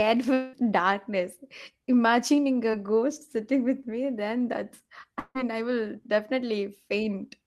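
From 0.33 to 0.55 s and again from 5.19 to 5.37 s, the sound is stretched into a fading buzz, the second ending in a brief silence. This is likely a long network dropout, unlike a concealed blip because about 0.2 s and 0.16 s go missing. At 2.71 to 2.75 s, a short concealed packet loss leaves only a quick 23 ms smear.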